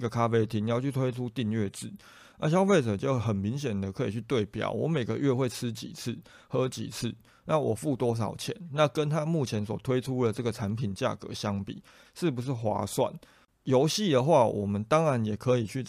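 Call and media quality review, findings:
Nothing stood out on listening through the speech recording, and no symptom was found to log against any component.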